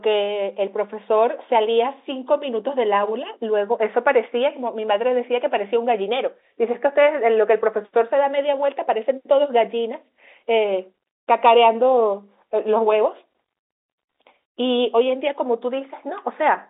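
No faults are audible in the speech; the telephone band, roughly 300 Hz to 3.7 kHz, is consistent with standard G.711 telephone coding working as intended.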